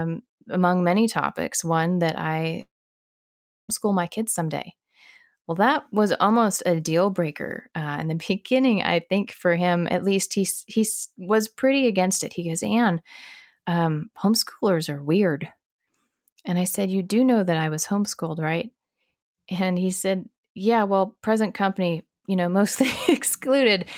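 At 2.61 s, just after "many topics one that", the speech cuts off. A brief fading buzz trails the last sound, then about a second of silence follows. Speech returns at 3.70 s with "my kids someday". Roughly 1.08 s of audio is simply gone, not delayed. This is a long network dropout, likely caused by packets failing to arrive. The receiver briefly extended the last sound, then gave up and played silence until the stream resumed.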